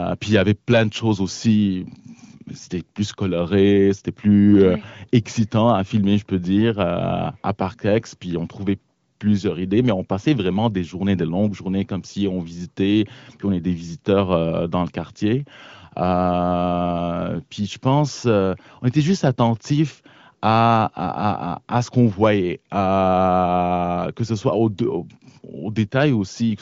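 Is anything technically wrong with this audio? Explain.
No, nothing is technically wrong with this audio.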